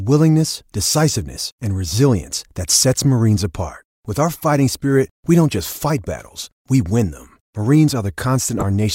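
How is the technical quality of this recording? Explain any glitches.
One glitch stands out, near the very end of the speech. From 8.58 to 8.63 s there is a sharp, fairly loud glitch lasting about 50 ms. It is a corrupt frame decoded: flipped bits in a few compressed frames were played anyway, so misread gains and codes scattered energy into the wrong frequencies.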